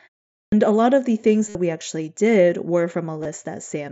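At 0.35 s, after a pause of 0.35 s, the start is clipped. The output woke late and swallowed about 170 ms, so "a lot of the" begins abruptly.

At 1.49 s, after "lot of the things", concealed Bluetooth headset packet loss fills 60 ms with a repeated buzzy stretch. At 3.23 s, after "we actually did were", a 22.5 ms loss is filled with a brief buzzy stretch.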